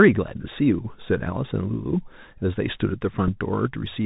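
Bluetooth CVSD headset codec, throughout: the speech is squeezed below 4 kHz, s sounds turn scratchy and granular hiss sits underneath, which fits 64 kbps one-bit delta coding. Bluetooth headset packet repeated, at 3.28 s: about 3.8 ms of audio is replaced by the previous packet decoded again, pointing to one lost packet and heard as a small tick.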